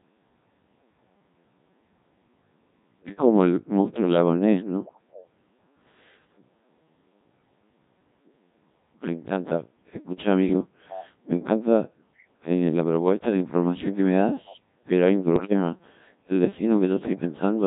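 From start to finish the speech sounds robotic, buzzy and heavily damaged, which points to the Codec 2 vocoder at a very low rate near 1.3 kbit/s. Only pitch, voicing, energy and a coarse spectral envelope survive, and the decoder rebuilds the voice from sine waves instead of the original waveform.

From 12.17 to 12.27 s a faint, brief copy of earlier speech surfaces, trailing its source by 452 ms and sitting far below the main voice. This is likely an echo leak: a loudspeaker's sound reached the far end's microphone, and its echo canceller failed to remove it fully.

Between 15.36 and 15.53 s the synthetic voice lurches in pitch, loudness and tone colour, breaking into a short warbling burst. These are bit errors on digital voice radio. A few percent of bits flipped, and each corrupted bit misset the pitch, level, voicing or spectrum of a whole frame.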